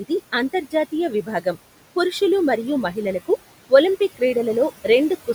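Noise suppressor artifacts run through the whole speech clip. The suppressor estimates the steady background and pulls down each frequency band it judges to be noise, frame by frame, cutting that noise by about 17 dB. The room noise, which sits about 17 dB below the speech, sinks in the gaps between words and comes back up underneath them as the gain on each band opens and closes.

From 1.1 to 1.56 s, just before "పురుషులు మరియు మహిళలకు ఒలింపిక్", there is speech cut by the noise suppressor. Here the suppressor treated low-level parts of the speech as background and attenuated them along with it, dipping by about 14 dB at the deepest point. Only short stretches are affected, adding up to roughly 150 ms across the span, and those softer sounds come out swallowed and faint.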